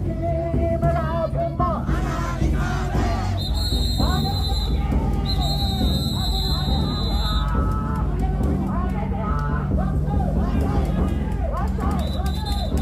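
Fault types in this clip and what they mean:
There are no fault types in this clip, so there is nothing whose meaning needs explaining.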